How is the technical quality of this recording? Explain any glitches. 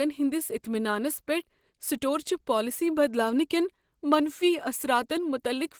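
The quality is limited by one fault that runs through the whole clip. From start to finish the speech sounds plainly hoarse and muffled, even though the band still extends to about 20.2 kHz. That points to Opus compression at a low bitrate, likely in its hybrid speech mode, which spreads too few bits across the signal.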